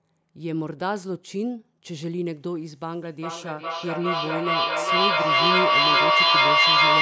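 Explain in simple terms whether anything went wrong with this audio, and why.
From 3.2 s to the end, the sound comes back roughly every 0.4 seconds: feedback echo between two devices. A second device replays the call, the first microphone catches it again, and here the repeats build up, louder than the original speech.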